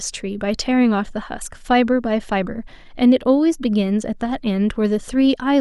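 Listening through this speech recording, nothing stood out as a technical problem at any point.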